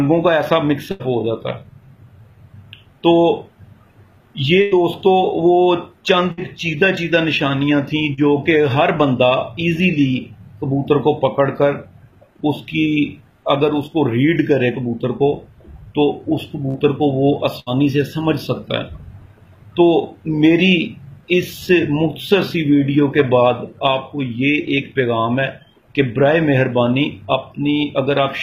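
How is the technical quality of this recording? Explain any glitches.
The recording has repeated dropouts from packet loss: five bursts and one shorter concealed loss.

Bursts of packet loss occur at 0.91–1.02 s, 4.62–4.73 s, 6.31–6.39 s, 16.69–16.77 s and 17.60–17.75 s. Each time, roughly 40 to 100 ms of audio never arrived. The receiver stretched the last sound across the hole for 53 to 96 ms, fading it as it went, so there is a held buzz or dying hiss before the sound picks up further along. At 16.69 s and 17.60 s, about 8 ms more was trimmed on resuming. On a spectrogram, each burst shows as frozen, smeared harmonics that fade out, followed by an abrupt restart. In the waveform, a repeating, decaying pattern sits in place of the real signal.

A short concealed packet loss occurs at 8.13–8.19 s. About 40 ms went missing, and 37 ms of synthesised continuation from the preceding sound bridges it before blending back. 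The result is a quick smear or wobble rather than an audible gap, and a brief transient there may simply be absent. A spectrogram shows a slightly blurred, unnaturally steady sliver; the waveform shows little more than a subtle irregularity.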